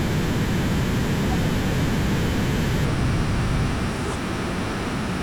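From 2.85 s to the end, a section at the wrong speed drops the speech to 0.762 times its pace, about five semitones lower, slow and deep, likely from a clock mismatch. On a spectrogram, harmonics shift abruptly downward and syllables stretch wider.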